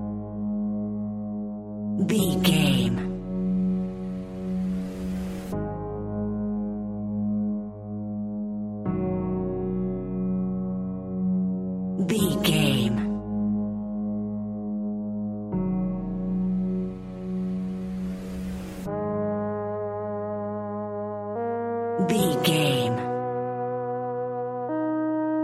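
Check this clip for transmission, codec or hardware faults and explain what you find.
Nothing here sounds off to me; the audio holds steady all the way and I can't pick out anything that points to a transmission, codec or hardware problem.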